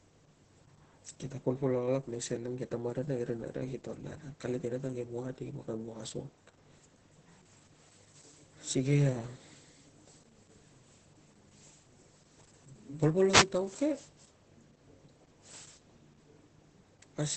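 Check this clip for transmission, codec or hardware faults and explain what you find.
Two faults affect this speech clip: a codec fault throughout and one brief radio fault.

Opus voice compression runs throughout. Coarse SILK excitation coding and a cutoff near 8.5 kHz fit roughly 10 kbps, giving hoarse, muffled, slightly robotic speech, steady rather than bursty.

A wireless microphone noise hit occurs from 13.29 to 13.46 s. A radio fade lets receiver noise surge into a 0.17 s static swish, unlike the codec's constant coloration.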